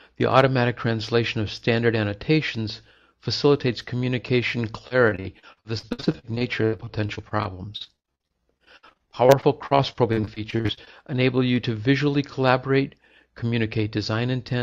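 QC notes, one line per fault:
4.87–10.88 s, repeated packet loss (robotic sound): choppy stretch with pieces missing. Dozens of short dropouts, the longest 82 ms, are each patched by extending the preceding sound, so about a quarter of this span is concealment rather than the original audio.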